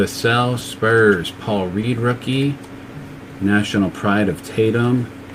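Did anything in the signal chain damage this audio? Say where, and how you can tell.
Yes. Brief smeared wobbles at 0.59 to 0.63 s and 1.81 to 1.85 s mark short concealed packet loss on the network, with each 20 ms gap filled by extending the preceding sound.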